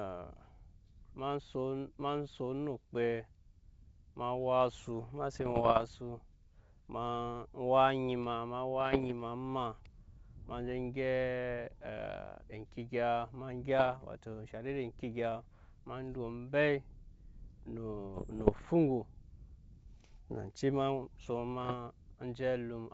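Bit errors on an ADPCM link break into this speech five times: 5.34 to 5.85 s, 8.81 to 9.13 s, 13.79 to 13.97 s, 18.15 to 18.67 s, and 21.60 to 21.75 s. Flipped bits corrupt the decoder's step size and predictor, so each error rings on briefly. They sound like pops and rough bursts, with quick jumps in level. The burst near 13.8 s is milder, fitting an error rate near half a percent rather than one percent. The G.722 wideband coding around them keeps its clear, light top end.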